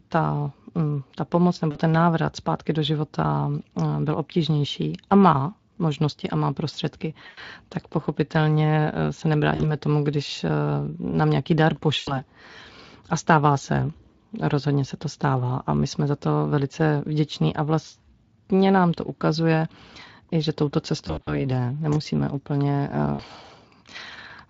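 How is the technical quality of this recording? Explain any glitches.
The speech has six short dropouts, at 1.71, 7.27, 9.55, 11.97, 21.07 and 23.13 s. At each one the sound smears into a buzzy tone or a coloured noise and fades, and the voice sounds thin for a moment afterwards. This is VoIP packet loss concealed by the speech codec. Between 40 and 140 ms of audio went missing, and the decoder filled each gap by extending its last pitch and filter while steadily lowering the gain. The dropout at 21.07 s is broken up over about 200 ms. The Speex coding underneath shows only light marks, which points to a fairly high quality setting.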